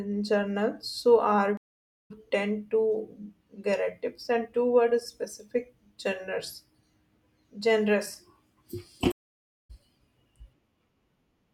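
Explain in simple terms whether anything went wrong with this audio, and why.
Two stream reconnects interrupt the speech, at 1.57 to 2.11 s and at 9.12 to 9.70 s. Each time the connection dropped, the audio went silent for about half a second, then a fresh decoder picked up roughly 0.4 s further on, so a short stretch is skipped.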